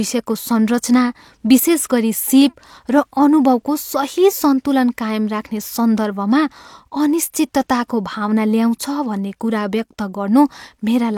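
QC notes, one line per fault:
No technical faults are audible in the signal, with level, continuity and frequency content holding steady across the whole recording.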